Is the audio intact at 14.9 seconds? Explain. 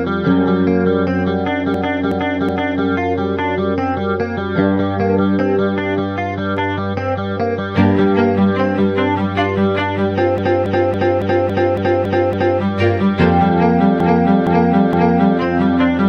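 No. Between 14.00 and 15.40 s, a block of compressed frames lasting about 0.46 s was delivered repeatedly and decoded three extra times. These repeated frames make the same fragment of sound stutter, and the playback runs 1.39 s longer.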